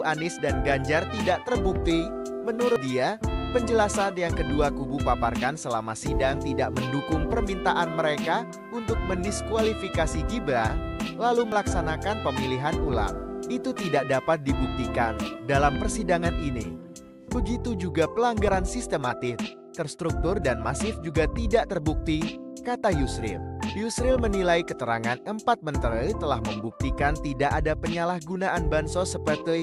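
Dropped buffers (overruns) at 2.76 s and 11.52 s: the sound jumps ahead, skipping roughly 70 ms and then 40 ms, likely from overwritten, uncollected input buffers.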